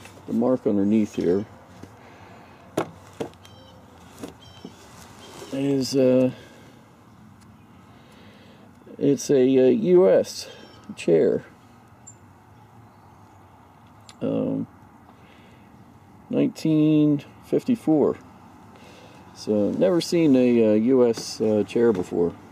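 Nothing here needs flagging; from the first moment to the last, the audio runs along without a single technical fault worth pointing out.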